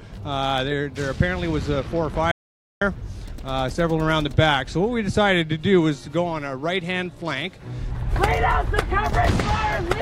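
At 2.31 s the audio drops out to silence for half a second, returning at 2.81 s. The gap carries no room tone at all, likely because the input signal was lost while recording continued, so whatever sounded during that half second is missing.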